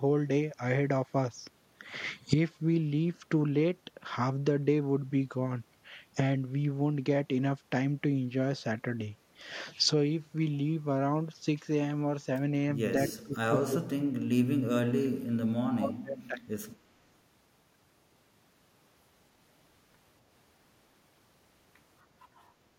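From 13.09 to 14.16 s and 14.39 to 16.38 s the speech collapses by roughly 35 to 40 dB, a likely case of speech suppressed in double talk. Waveform and spectrogram show near-empty gaps.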